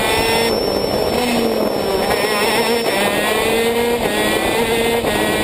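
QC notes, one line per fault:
0.00 to 3.12 s, feedback whistle: a thin, steady tone at 5.4 kHz sits well below the sound, swelling and fading slowly, then stops. Likely a speaker-to-mic loop running right at the edge of feedback, ringing at one pitch without building into a howl.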